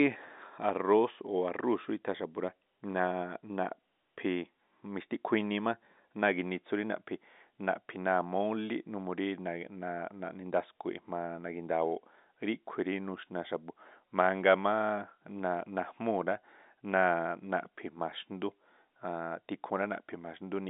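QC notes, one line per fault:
Nothing to flag here, just telephone-band speech carried over G.711 A-law, with the top end stopping a little under 3.8 kHz the way a phone line should.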